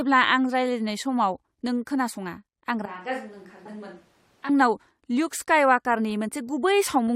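From 2.86 to 4.49 s the close microphone's feed likely dropped out, leaving a switch to a distant microphone. The speech abruptly turns hollow, roomy and thin in the bass, falls roughly 10 dB, and gains audible background noise, then snaps back just as suddenly.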